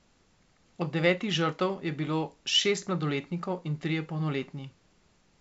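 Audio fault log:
Nothing stood out on listening to this speech, which comes through a G.722 wideband telephone path at what sounds like 64 kbit/s with its content ending around 7.7 kHz.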